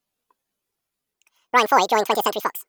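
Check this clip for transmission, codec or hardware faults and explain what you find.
From 1.13 s to 2.68 s the speech suddenly races at double speed and jumps an octave, a 12-semitone rise. This is audio read two samples at a time (double speed): pairs of samples are consumed as single frames, so high frequencies fold back.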